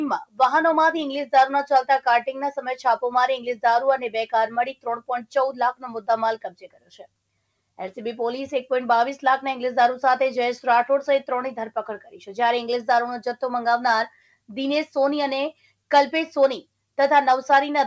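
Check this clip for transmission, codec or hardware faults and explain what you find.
A speech-tuned noise suppressor was left running on this audio. That is the fault here. The sound travels a call path that stops at 8 kHz, which fits a 64 kbps G.722 link.

Noise suppressor applied to music or sounds, throughout: the suppressor mistakes steady tones and tails for noise. The level swings by roughly 5 dB, so the sound pumps and thins.

Sound cut by the noise suppressor, at 4.72 to 5.09 s, 6.44 to 7.07 s, and 14.1 to 14.5 s: held or fading sound sinks sharply. The drops reach about 17, 18 and 10 dB.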